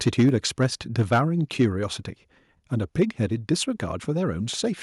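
From 0.06 to 0.36 s the microphone input was likely set too high, so the loudest speech peaks ran about 3 dB past the converter's ceiling and had their tops sheared off, a few percent of samples, giving a harsh, crackly edge. At 0.29 s the call software likely stepped the microphone volume down by about 3 dB in one move, so voice and background drop together abruptly. Microphone overload still returns at 0.62–0.65, 0.99–1.18, 1.6–1.65 and 3.01–3.03 s, about 1 to 4 dB over, with the brief burst at 3.01 s the most heavily clipped.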